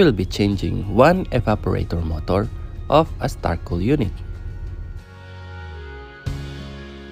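Between 1.39 and 1.54 s two sharp pops strike in quick succession, peaking a few decibels above the surrounding level while the sound carries on underneath. This loud pop is likely a sudden voltage pulse entering the signal path and shaped by the circuitry after it.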